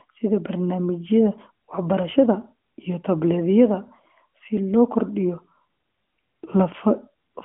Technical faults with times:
none

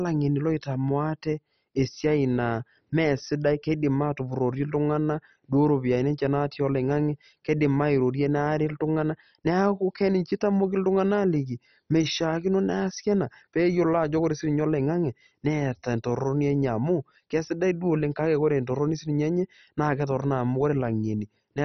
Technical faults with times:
0.00-21.65 MP2 compression

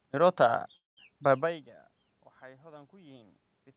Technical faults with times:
0.76-0.99 call audio freeze

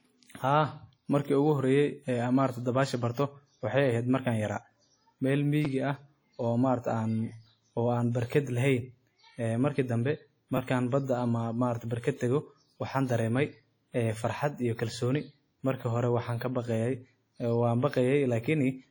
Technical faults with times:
0.00-18.90 WMA compression
5.65 repeated buffer
10.57 repeated buffer
14.94 repeated buffer

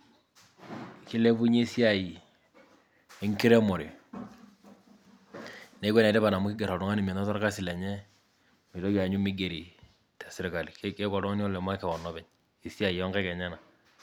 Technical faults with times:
none

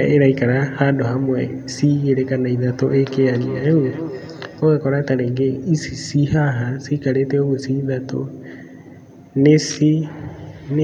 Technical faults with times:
2.88-4.64 feedback echo between two devices

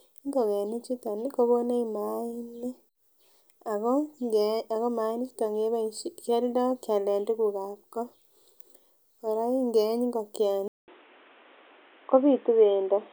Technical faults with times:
10.68-13.12 input switched to a poorer device

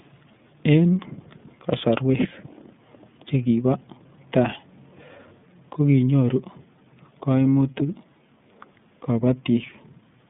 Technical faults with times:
0.00-10.30 iLBC codec

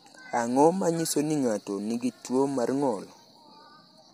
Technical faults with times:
0.00-4.13 low-delay AAC compression

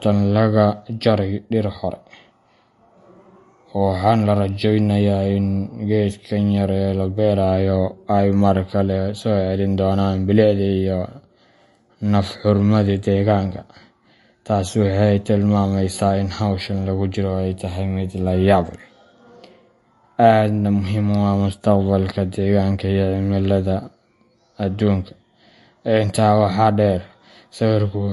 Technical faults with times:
0.00-28.13 MP3 compression

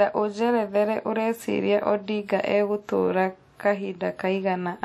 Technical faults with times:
0.00-4.84 WMA compression

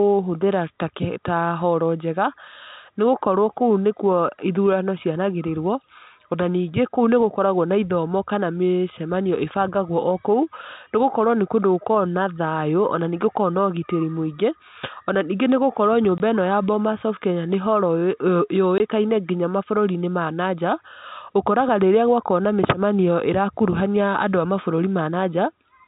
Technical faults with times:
16.18 packet loss filled with silence
18.78 packet loss filled with silence

